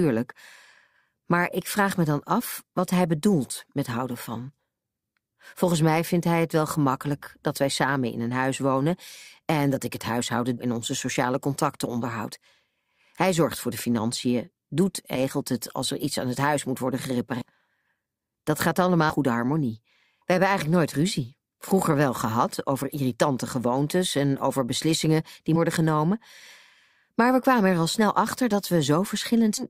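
Compressed frames are being skipped at 10.57, 15.15, 17.41, 19.09, 20.21, 25.55 and 29.57 s, where whole 20 ms frames never get decoded. The speech lurches ahead by between 100 and 400 milliseconds each time.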